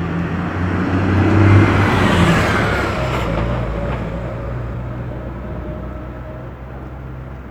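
Damaged data in the compressed stream hits twice. Around 4.69 to 4.75 s, a short run of the coded frames is corrupt, so the decoder misreads them, loses frame sync and has to hunt for the next valid header. That produces a brief chirp, squawk, click or short hole of about 50 ms cutting across the sound. The same breakdown recurs at 6.46 to 6.51 s, giving a second blip of similar length and character.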